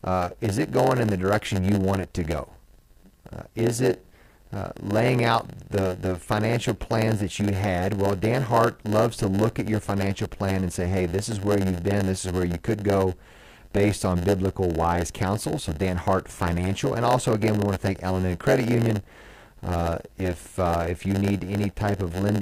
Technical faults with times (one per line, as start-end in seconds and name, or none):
0.00-22.41 block size mismatch (padded)